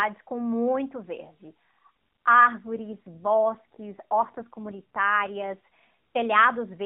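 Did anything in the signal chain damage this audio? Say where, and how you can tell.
Yes. An AMR rate drop at the codec stage, from 2.58 to 5.56 s: the speech turns rougher and more synthetic, with no gap and no change in bandwidth, which points to the network forcing the rate down from 12.2 to about 5.9 kbps before recovering.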